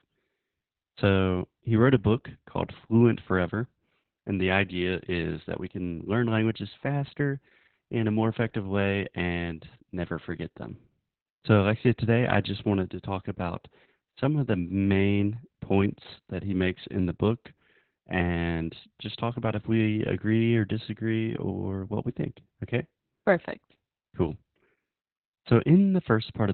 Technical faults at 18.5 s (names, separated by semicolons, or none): Opus voice compression